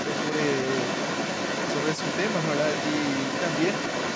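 Other side's voice leaking through runs from 0.0 to 4.15 s: a second voice sits under the main speech for the whole clip, at roughly the same loudness. The likely cause is the far end of the call playing from the talker's loudspeaker, being picked up again by the microphone, and not being fully removed by the echo canceller. Both voices share the call path's limited band, which tops out at 8 kHz.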